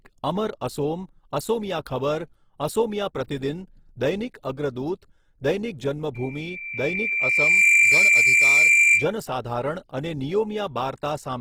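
Low-bitrate compression runs through the whole speech clip, likely Opus in its music mode, which fits a rate near 16 kbps. Starved bands are filled with folded or synthetic noise, so the full-bandwidth voice sounds rough, grainy and hissy rather than swirly.

From 6.14 s to 9.13 s, loudspeaker feedback squeal sets in: the microphone picks up its own loudspeaker output and the loop gain at 2.4 kHz exceeds one, so that tone grows by itself. A piercing tone swells over roughly a second and a half, ending about 10 dB above the speech.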